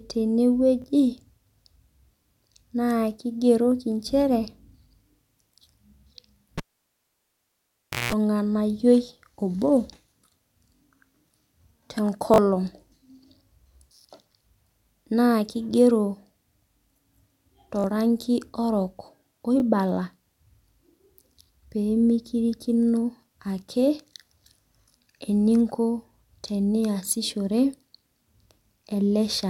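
At 0.82 to 0.84 s new audio arrived late and the playback device sent its last buffer out a second time. This repeated buffer is heard as a quick stutter-click with a hard join, and the repeat length fits a 20 ms buffer.

From 6.58 to 8.13 s a live cable was pulled and plugged in again. A pop is followed by about 1.5 s of near silence, then roughly 180 ms of 60 Hz mains buzz while only the tip makes contact, and a second pop as the sound returns. Within that stretch, at 7.94 to 7.96 s, one more 20 ms buffer repeats once.

The same buffer fault recurs at 10.76 to 10.80 s, 12.34 to 12.38 s and 17.80 to 17.84 s. At each of these the piece plays three times, giving a longer buzzy stutter and dropping roughly 40 ms of audio. It recurs again at 19.60 to 19.62 s with a single repeat.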